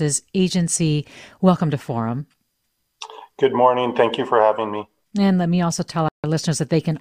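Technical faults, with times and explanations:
6.08–6.24 s, Bluetooth stall: the wireless link likely stalled under interference, draining the headphones' buffer until retransmitted packets arrived, so the speech right after "let me also" drops to silence for 0.15 s before resuming.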